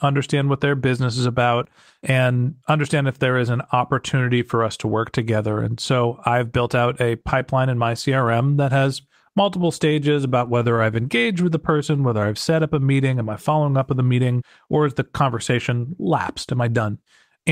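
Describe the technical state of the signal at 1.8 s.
At 1.8 s the speech signal is intact, with no audible technical fault at that moment.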